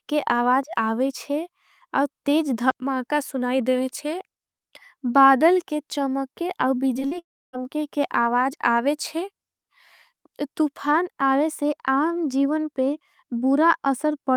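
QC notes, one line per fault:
6.93–6.97 s, 6.99–7.03 s, 7.07–7.13 s: short concealed packet loss, just after "बादल के चमके और". Gaps of 20, 20 and 40 ms were patched by extending the preceding sound, then crossfaded back, giving three quick smears or wobbles in close succession.
7.19–7.55 s: long network dropout, likely from an interruption in packet delivery. About 340 ms of audio is missing. The receiver stretches the last sound into a fading buzz or hiss, then leaves roughly 0.29 s of near-silence before the audio resumes further on.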